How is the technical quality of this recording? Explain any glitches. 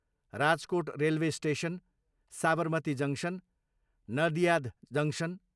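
No technical faults are audible anywhere in the speech recording.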